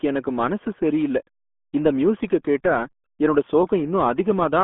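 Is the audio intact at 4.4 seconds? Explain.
No. At 4.4 s, as throughout, the RealAudio 14.4 codec applies: heavy low-bitrate coding, consistent with about 8 kbit/s, leaves nothing above 3.8 kHz, so speech sounds muffled and gargly.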